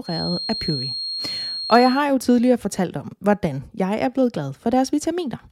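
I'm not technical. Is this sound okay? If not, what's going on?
No. From the start of the clip to about 2.05 s, just before "jo tidligere fortalt om", there is a feedback whistle: a thin, steady tone at about 4.2 kHz sitting under the speech, a fair bit quieter than it and slowly swelling and fading in level. This is likely sound from a loudspeaker leaking back into the microphone, with the loop held right at the edge of feedback so that one high pitch rings on without growing into a howl.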